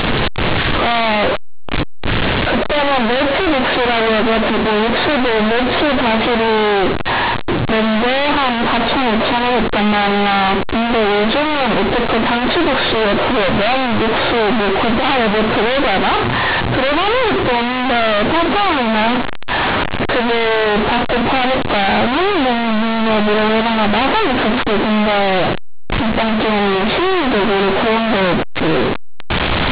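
From start to finish the speech suffers companded audio read as linear: A-law telephone bytes are played back as plain linear 8-bit samples with no expansion. Every zero crossing throws the output across roughly half its range, so quiet passages blare as loudly as loud ones. It sounds harsh, buzzy and overdriven, with heavy noise in pauses. The waveform looks like a dense, bent block, and the spectrogram shows broadband smear up to the 4 kHz ceiling of the 8 kHz coding.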